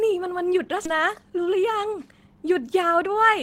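A skip ahead at 0.85 s in this speech drops about half a second of audio, joining the two sides of the jump with no gap after audio was dropped while later audio was already waiting. Jitter buffer speed-up follows from 0.94 to 2.36 s at 111% speed and again from 2.83 to 3.36 s at 107%, trimming roughly 150 ms and then a few tens of milliseconds in short pitch-period cuts, so the speech sounds hurried at unchanged pitch.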